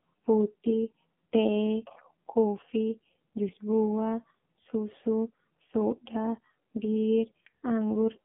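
The speech ran throughout through an AMR narrowband mobile codec at a bitrate that sounds like about 5.9 kbps, confining it to 150 Hz–3.4 kHz and leaving it heavily buzzy and synthetic.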